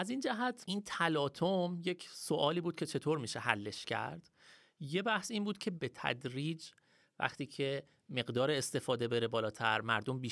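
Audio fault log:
No faults heard.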